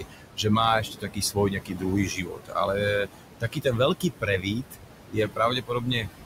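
Noise suppressor artifacts run through the whole recording. The suppressor pulls down every band it judges to be steady noise by about 18 dB. The room noise, sitting only about 9 dB under the voice, therefore sinks in the gaps and swells back under each phrase.

Speech cut by the noise suppressor occurs seven times: 0.00–0.45 s, 0.81–1.85 s, 2.06–2.56 s, 3.05–3.23 s, 3.40–3.80 s, 4.00–4.76 s and 5.10–6.11 s. In each stretch the suppressor mistakes quieter parts of the speech for noise and turns them down with the background, by as much as about 17 to 18 dB. Within each window, roughly 0.1 to 0.7 s of soft consonants and trailing syllables end up swallowed or faint.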